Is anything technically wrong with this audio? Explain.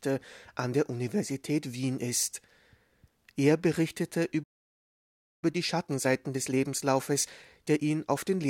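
Yes. At 4.43 s the speech cuts out for about one second until 5.44 s, a playback stall, likely the player starving for data or its thread getting blocked.

From 5.44 s to 8.44 s there's time-compressed catch-up: the player clears its backlog by trimming and cross-fading small chunks, so the speech runs about 1.1 times fast at normal pitch.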